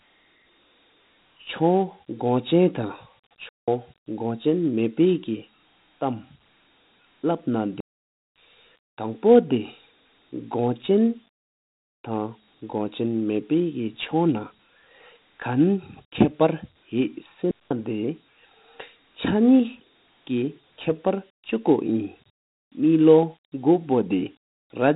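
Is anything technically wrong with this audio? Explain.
Yes, two things. The whole clip of speech carries Dialogic VOX ADPCM coding damage, and there are three digital wireless dropouts on top of it.

The Dialogic VOX ADPCM sound runs the full length. This is the telephony format that stores each sample as a 4-bit step from a running prediction, which fits a 32 kbps stream at 8,000 samples a second. Nothing gets through above about 3.8 kHz, so everything sounds boxed-in and phone-like. Because the coarse steps can't track the waveform closely, you get a gritty hiss that rides along with the speech and comes and goes with it.

The digital wireless dropouts land at 3.49 to 3.68 s, 7.80 to 8.19 s and 17.51 to 17.71 s. That's roughly 0.19 s, 0.39 s and 0.20 s of near silence. The first ends right before "གོ ཆེན". Each time, the receiver stopped getting enough good data and muted itself with a very fast fade. 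So you hear a clean hole rather than a crackle or burst of noise, and the sound drops out and comes straight back with nothing smeared around the gap.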